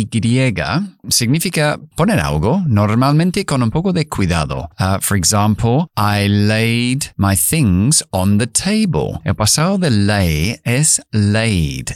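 Nothing in this speech recording stood out as a technical problem on listening.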